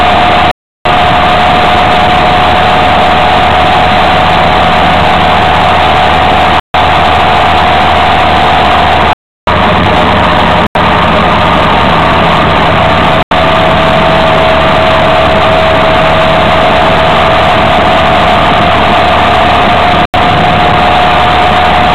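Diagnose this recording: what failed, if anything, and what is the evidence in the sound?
Blocks of digital silence from the driver or buffer stage: the output simply wasn't filled in time. Hard-edged dropouts, cutting in and out, at 0.51, 6.60, 9.13, 10.67, 13.23 and 20.05 s. They run 85 to 341 ms, mostly whole multiples of 4096-sample buffers at 48 kHz.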